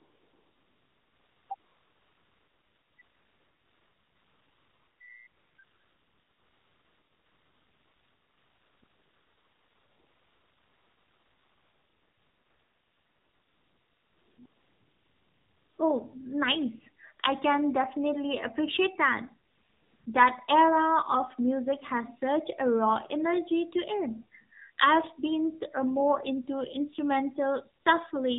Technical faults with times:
0.00-28.39 AMR narrowband mobile codec
0.00-5.00 AMR comfort noise
5.28-15.78 AMR comfort noise
19.48-20.06 AMR comfort noise
27.82-27.86 AMR comfort noise

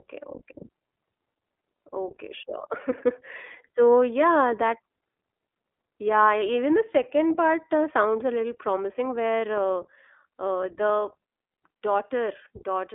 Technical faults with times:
0.00-12.95 iLBC codec

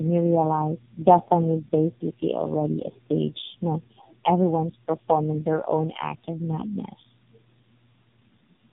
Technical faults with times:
0.00-8.72 tandem speech coding

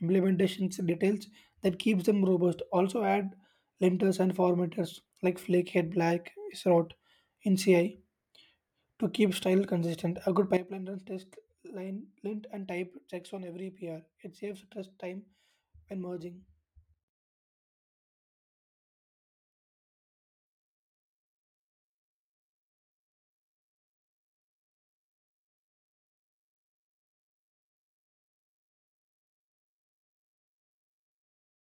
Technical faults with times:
10.57-31.67 sudden gain jump

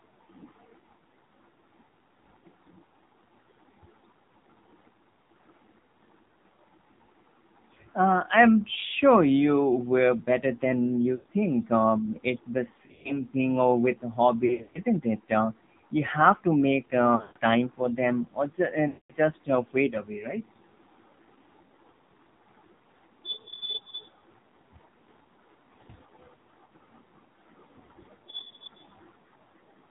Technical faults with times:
0.00-29.91 AMR narrowband mobile codec
11.16-11.25 lost AMR speech frames
12.86-13.20 lost AMR speech frames
14.46-14.79 lost AMR speech frames
17.16-17.37 lost AMR speech frames
18.88-19.12 lost AMR speech frames
26.66-26.71 lost AMR speech frames

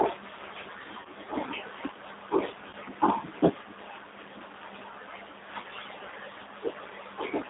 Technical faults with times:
0.00-7.49 G.729 codec
1.01-1.08 VoIP packet loss concealed by the speech codec
2.69-2.76 VoIP packet loss concealed by the speech codec

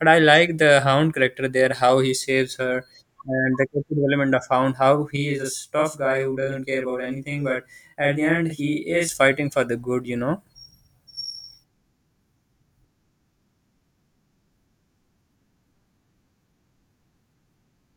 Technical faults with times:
5.16-9.09 channel delay (doubling)

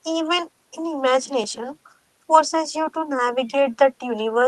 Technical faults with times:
none

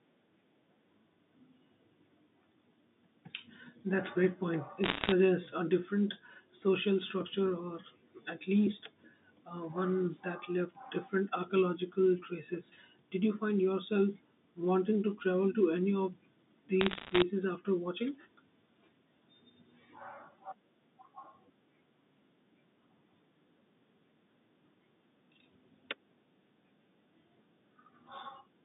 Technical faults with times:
4.84-5.12 bit errors on a digital phone line
16.81-17.22 bit errors on a digital phone line

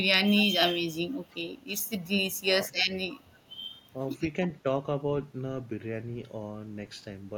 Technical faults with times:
0.37-0.47 echo leak
1.09-1.76 echo leak
2.42-2.47 echo leak
2.48-2.69 speech suppressed in double talk
3.09-3.40 echo leak
3.96-4.08 speech suppressed in double talk

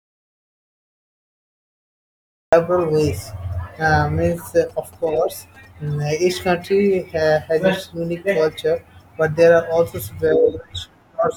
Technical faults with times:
0.00-2.52 audio dropout to silence
4.46-6.51 GSM signalling bursts

